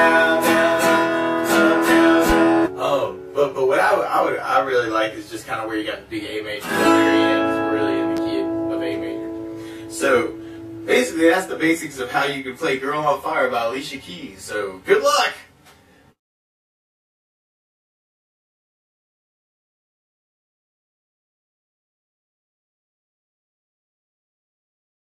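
At 8.17 s a single loud pop cuts in and lasts until about 8.21 s. It rises roughly 10 dB above the surrounding sound. The likely cause is a sudden voltage step or pulse entering the signal path, from a plug, a switch, static or a driver glitch. The circuits after it shape that pulse into a short, sharp burst. It is heard as one pop or thump on top of the audio. The sound underneath carries on without a break.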